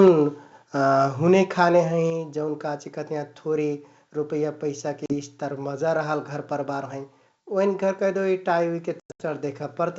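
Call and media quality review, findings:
Microphone overload, 0.00–0.08 s: harsh, crackly edge on the opening peak, flat-topped waveform, about 3 dB over full scale, roughly a tenth of samples clipped. Likely cause: mic input gain set too high, so peaks hit the converter ceiling. The distortion rides on the loudest sound itself, not on a gap.

Microphone volume stepped down, 0.08 s (about −4 dB) and 2.1 s (about −5 dB): sound and background both drop in one clean step. There are no holes and no distortion at the step. Likely the call software's gain control cutting device input, the first step right after the clipped peak. Unlike a codec fault, the level stays lower afterwards.

Packet loss on an ADPCM call, 5.06–5.14 s: 40 ms hard-edged silence, fitting about two packets. On return, slightly distorted speech while the decoder's adaptive predictor and step size resync with the sender, settling within tens of milliseconds. 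9.00–9.22 s: 180 ms lost, scattered over 200 ms, longest run 100 ms, about ten packets, repeated resync artefacts.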